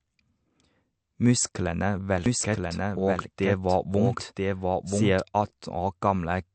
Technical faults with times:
0.00-6.54 MP3 compression
2.26-5.20 doubled audio track

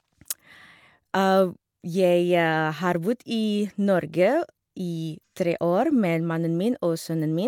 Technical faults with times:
none

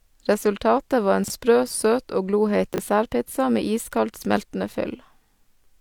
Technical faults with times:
1.24-1.30 chunks out of order
2.74-2.78 chunks out of order

